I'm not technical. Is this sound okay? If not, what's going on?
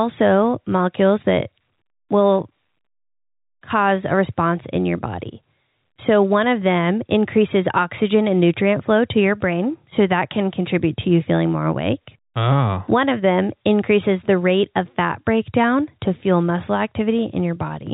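Yes, nothing stood out as a problem when listening to this speech recording.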